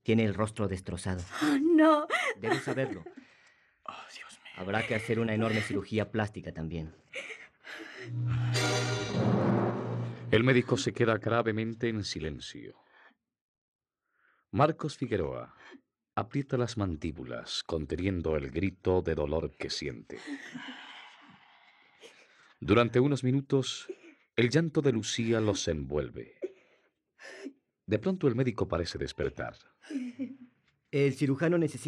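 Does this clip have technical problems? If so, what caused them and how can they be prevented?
No, the signal shows no technical faults anywhere in the clip, so there is nothing to trace to a cause or to prevent.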